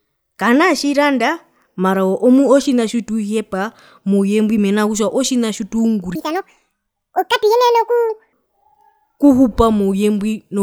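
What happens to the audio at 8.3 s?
At 8.3 s a section at the wrong speed ends. From 6.15 to 8.33 s the speech runs 1.74 times too fast, so it is hurried and raised by roughly ten semitones. Playback against a mismatched clock is the likely cause, and normal speed and pitch return at 8.33 s.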